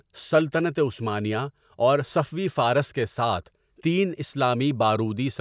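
No technical faults can be heard anywhere in the speech recording. There is nothing here that calls for a time or a fault description.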